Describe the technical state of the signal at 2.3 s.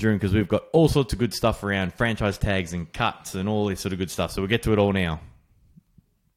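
Around 2.3 s the speech signal is intact, with no dropout, clipping, distortion or other fault to be heard at that moment.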